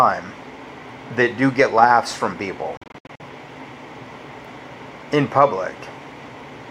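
From 2.77 to 3.21 s, silent holes up to 64 ms long break the sound, likely a Bluetooth dropout: it resumes skipped ahead rather than paused.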